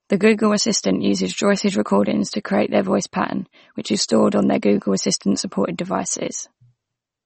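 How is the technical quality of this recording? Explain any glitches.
The quality is held back by plainly audible codec damage running through the whole clip. The likely cause is MP3 compression at a low bitrate, which fits about 32 kbps. Nothing survives above 8.4 kHz, so the top end is cut off. The encoder drops weak frequency components that flicker on and off from frame to frame, which gives the speech a watery, swirly quality and smears its attacks.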